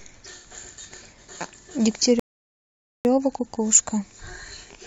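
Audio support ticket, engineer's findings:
Rebuffering stall, 2.20 to 3.05 s. Speech cuts to silence, then resumes exactly where it stopped; nothing lost, about 0.86 s added. Probable component: playback buffer. Player ran dry of downloaded audio and halted until more data arrived.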